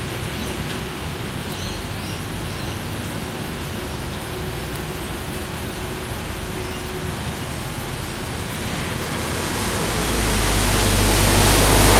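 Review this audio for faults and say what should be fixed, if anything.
No faults can be heard anywhere in the recording. Nothing needs to be fixed.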